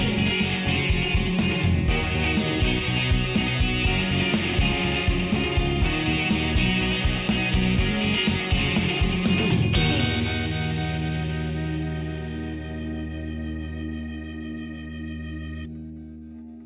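No faults detected anywhere in the audio.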